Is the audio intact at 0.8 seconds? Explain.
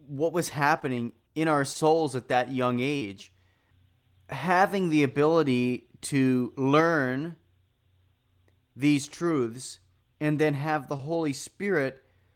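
No, not quite. Right after "what was" there's a short concealed packet loss running from about 0.79 to 0.83 s, just before "in our". A bit of the call arrived too late to decode, so the receiver papered over the gap by extending the preceding sound and then crossfading back into the real speech. You hear it as a quick smear or wobble rather than a clean dropout, and a brief consonant there can get swallowed.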